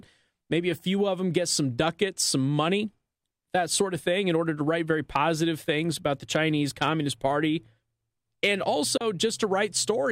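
At 8.97 s the receiver stopped getting usable data, either because the digital signal dropped or because a frame failed its checksum, and it muted until good frames arrived again at 9.01 s. This is a digital broadcast dropout: the speech fades out over about 3 ms into a brief hole of roughly 32 ms, a gap that fits a single lost frame, and then resumes with whatever was sent during the gap simply gone.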